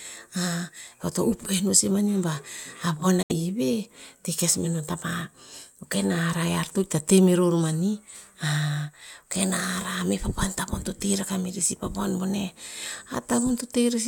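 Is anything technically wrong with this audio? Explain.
Yes. At 3.22 to 3.32 s, just after "a von", the speech cuts to silence and resumes further on; likely a Bluetooth dropout, where late packets were discarded.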